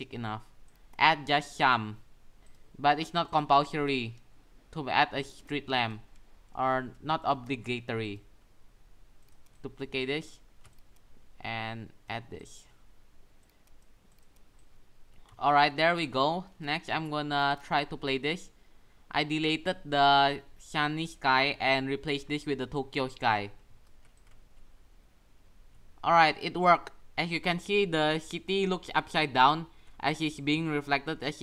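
No faults are audible anywhere in the recording.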